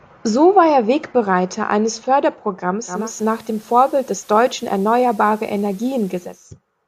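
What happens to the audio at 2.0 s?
Nothing goes wrong at 2.0 s; the speech carries on intact through that moment.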